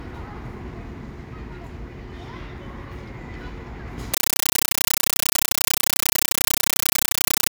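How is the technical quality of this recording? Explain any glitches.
The recording breaks down badly partway through. From 4.14 s to the end, the sound is replaced by a compressed stream played as audio. An AC-3 (Dolby Digital) bitstream was passed on as though it were ordinary samples and never decoded. Each coded frame comes out as a burst of about 9.3 ms of noise followed by silent padding, repeating 31.25 times a second. The density of the bursts fits a 448 kbps stream. The result is very loud, harsh chattering static. What separates it from random noise bursts or crackle is its strict, machine-steady rhythm of equal-length bursts with silent gaps between them.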